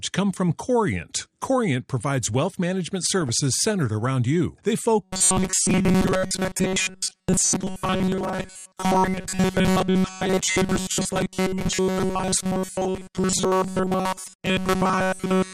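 The whole clip of speech sounds dull, granular and gurgly, likely MP2 compression at a low rate, something like 80 kbps, with upper sub-bands switched off.

DAB burbling shows up at 1.21 to 1.25 s and 3.22 to 3.29 s. Bit errors slip past error correction into the audio frames, so single sub-bands jump in level and give brief blips of noise.

From 5.04 s to the end you get the robotic sound from repeated short buffers. The audio takes on a rigid metallic buzz at 188 Hz that roughly tracks the speech. That's likely the last roughly 5 ms being looped while most of the real audio gets skipped.

Further DAB burbling shows up at 5.54 to 5.78 s and as a tiny blip at 9.04 s, both on top of that buzz.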